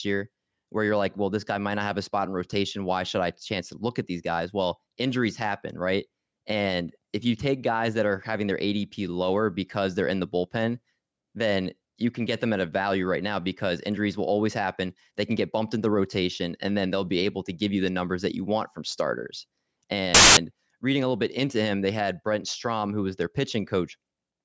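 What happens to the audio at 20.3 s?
At 20.3 s the speech is interrupted by file tags played as audio, from 20.15 to 20.37 s, just before "reading a little bit". An embedded cover picture's compressed bytes are read as samples, giving a hard-edged burst of very loud white noise, a solid broadband block on a spectrogram and a dense rectangle on the waveform.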